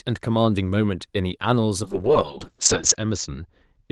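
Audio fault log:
1.84 s to the end, call bitrate drop: the audio turns rough and muffled, which fits the call encoder, likely Opus, being pushed from about 32 kbps down to roughly 6 kbps after its bandwidth estimate fell. At the lowest rate, held for about 1.1 s, the codec quantises the speech coarsely and narrows the band. On a spectrogram the upper edge drops from 12 kHz to 8 kHz, and the harmonics look smeared and blocky.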